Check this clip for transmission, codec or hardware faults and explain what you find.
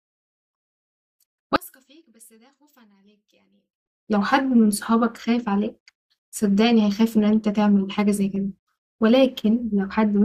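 One fault is audible. From 1.56 to 3.86 s the speech falls by about 33 dB to a faint residue. This is the mark of one channel inverted: with reversed polarity on one side, the content common to both channels likely cancels when they are summed to mono. Unlike a dropout or mute, the sound never goes fully silent.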